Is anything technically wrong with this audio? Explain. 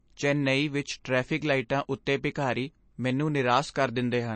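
Yes, two faults are audible.

Throughout the speech, the sound is dull and watery. Nothing comes through above about 8.3 kHz, and the codec damage is plainly audible as swirling in the upper band and smeared consonants. This is likely MP3 compression at a low bitrate, roughly in line with 32 kbps. Short of bits, the encoder cuts everything above a fixed treble limit and drops weak frequency lines, which flicker in and out from frame to frame.

At about 2.06 s there is a brief hiss of roughly 12 ms just ahead of a sharp onset, which arrives softened. This is pre-echo: the codec spread quantisation noise across its whole transform block, so noise sized for the loud attack also fills the quiet moment before it.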